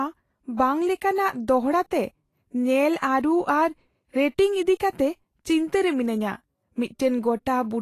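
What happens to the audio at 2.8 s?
Vorbis compression, heard at 2.8 s and throughout the speech, is the likely cause: nothing above 14.2 kHz, and coarsely quantised treble turns fine detail into grainy hiss, fitting a bitrate near 33 kbps.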